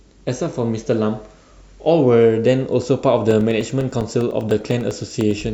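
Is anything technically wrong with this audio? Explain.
Yes. From 3.31 s to 5.41 s the speech carries a steady train of ticks, ten per second, heard only while there is signal. These are periodic USB or driver dropouts: every 0.1 s something stalls the USB bus or the audio driver, and a couple of milliseconds of audio go missing and are replaced by silence. Each gap breaks the waveform abruptly, producing a click, and there are around twenty of them, evenly spaced.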